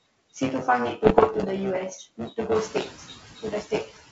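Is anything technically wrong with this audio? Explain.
Yes, there are four distinct faults in this speech.

Buffer tearing runs throughout. The software filling the playback ring buffer and the hardware reading it have drifted out of step, so they cross inside every period. About a fifth of each buffer replays audio some 15 ms old, with hard joins on both sides. This produces a robotic buzz at 125 Hz, which fits a 128-sample buffer, and the buzz is heard only while there is signal.

Noise suppressor artifacts also run throughout. The suppressor cuts bands it judges to be steady noise by about 14 dB, frame by frame. The background drops between phrases and swells back under the speech.

Bit errors on an ADPCM link occur from 1.04 to 1.46 s. Flipped bits, at a rate of around one percent, disturb the G.722 decoder's step size and predictor, so each error rings on for milliseconds. The result is pops, rough bursts and brief jumps in level.

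The noise suppressor catches up from 2.55 to 2.8 s. The room noise rises by about 14 dB at roughly 2.5 s, and the suppressor's estimate lags behind it. For 250 ms the noise gets only about 7 dB of reduction, then it sinks as the estimate adapts.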